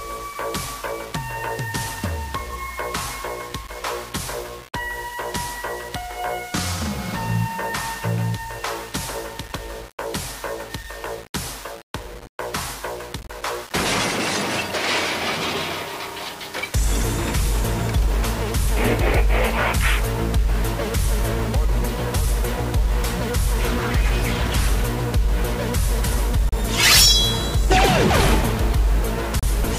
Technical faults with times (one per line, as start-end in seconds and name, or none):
0.00-29.78 low bit depth without dither